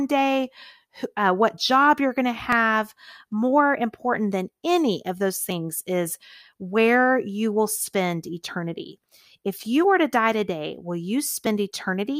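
At 2.52 s, just after "job you're going to", then at 5.50 s, between "than any of those" and "is where you will", at 8.48 s, and at 11.46 s after "to die today will", the speech skips forward. These are audio missing between chunks: a sliver of roughly 20 ms vanishes and the two sides butt together. The even spacing of about 3 s likely reflects fixed chunk boundaries. Unlike a dropout, no silent gap is heard, only a clipped jump.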